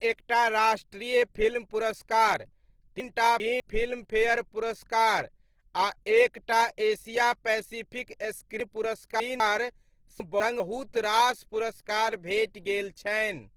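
Throughout the speech, tones sound noisy, rough and grainy rather than swirly, with the full bandwidth kept. This is likely Opus compression in its music (CELT) mode, filling starved bands with folded or noise content, which fits a low bitrate around 16 kbps.

At 3.0–3.6 s, 8.6–9.4 s and 10.2–10.6 s there are chunks out of order: a 200 ms segment plays two, three and one chunk late respectively. Nothing is lost, but each passage sounds jumbled, with hard joins where the order breaks.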